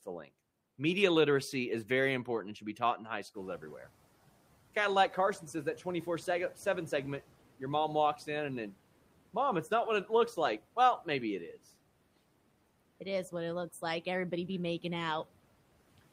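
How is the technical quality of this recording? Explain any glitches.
The recording has one clear glitch, a noise suppressor catching up. It runs from 3.34 to 3.91 s, just after "be taught in high". The room noise jumps by about 14 dB at around three and a half seconds. The suppressor's noise estimate lags behind that jump. For those 0.57 s, the noise comes through louder and less cleaned. Then it sinks by about 9 dB as the estimate adapts. After the rise, the room noise sits about 24 dB below the speech.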